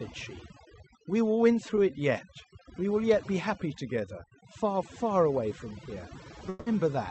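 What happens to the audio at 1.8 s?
From 1.76 to 1.78 s there is a short concealed packet loss. About 10 ms of audio never arrived, and the receiver patched the hole by extending the preceding sound before blending back into the real signal. It is heard as a brief smear or wobble rather than the hard silence of a true dropout or the sharp edge of a click. Around that moment, as throughout, overdone noise removal is active. It is pushing frequency bands near the noise estimate down or off, leaving a lowered background that breaks up into twinkling specks. This is a steady coloration, unlike the single momentary disturbance of the concealment.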